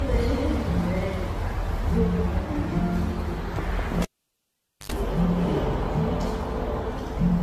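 From the start, the whole recording has a swirly, hollow character with smeared attacks and nothing above 14.1 kHz. That is more damage than a single 64 kbit/s AAC-LC pass would leave, so the likely cause is generation loss: repeated decoding and re-encoding, perhaps around seven times, with each pass quantising on a shifted frame grid and adding its own noise and spectral gaps. Unlike a single low-bitrate encode, the smearing compounds rather than staying uniform.

At 4.02 s a pop marks the cable being pulled and plugged in. Near silence follows for about 0.85 s. Within that gap comes a short burst of 50 Hz mains buzz, about 88 ms long, while only the plug tip makes contact, and a second pop at 4.92 s as the sound returns. The buzz between the two pops is what sets this apart from a dropout or a mute, which would cut cleanly to silence and back.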